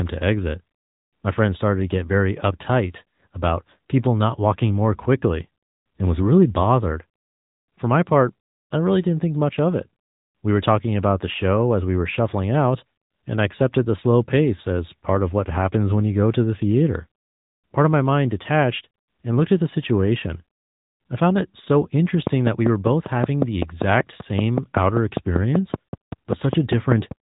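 AMR narrowband mobile codec damage runs throughout this speech: nothing passes above 3.8 kHz, and the sparse pulse-driven vocal-tract model, at a rate consistent with 10.2 kbps, leaves a plainly audible buzzy, synthetic edge.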